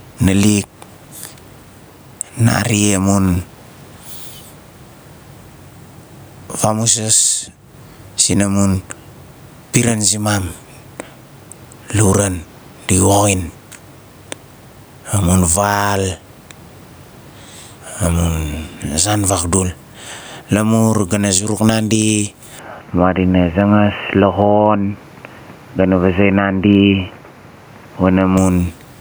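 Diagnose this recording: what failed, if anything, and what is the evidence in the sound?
Gain pumping runs through the whole speech clip. The gain swings by around 15 dB. The likely cause is input gain set far too high, with a fast limiter in call processing clamping each peak and squashing the dynamics.

From 22.59 s to 28.37 s the input switched to a poorer device. Nothing comes through above 3 kHz, so it turns dull and boxy. It drops a few dB and brings a new noise floor about 40 dB down, with no gap at the switch. The driver likely moved capture to another mic or a headset call profile.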